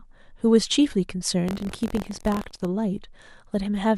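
From 1.46 to 2.65 s a robotic 43.1 Hz buzz rattles the speech. This is buffer tearing, which fits a 1024-sample buffer repeatedly splicing in slightly older audio.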